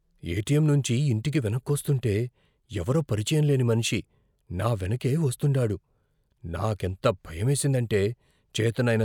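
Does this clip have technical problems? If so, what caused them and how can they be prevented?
No, there are no technical faults to point to in this speech clip. Nothing in it calls for a fix or a preventive step.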